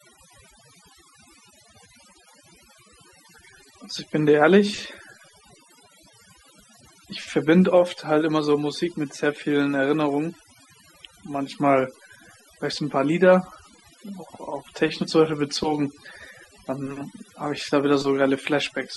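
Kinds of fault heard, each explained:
Overdone noise removal: noise reduction set too aggressively drops bands near the noise floor, leaving near-silent gaps with twinkling specks throughout.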